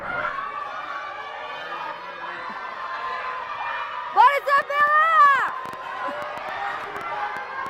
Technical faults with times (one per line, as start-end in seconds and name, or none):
4.58-7.67 train of clicks